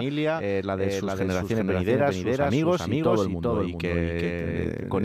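From start to finish, the speech carries a doubled audio track. A second full-band copy trails about 0.4 s behind, at roughly equal loudness. It adds no decay or room colour. The likely cause is the same signal captured twice through paths of different delay.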